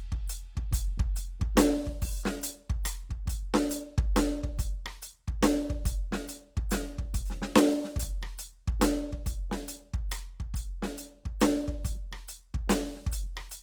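From start to finish the music sounds grainy and rough, its tones smeared with a noisy texture, though the top end still reaches about 20.2 kHz. The likely cause is Opus compression in its music mode, filling starved bands with noise at a rate that fits around 24 kbps.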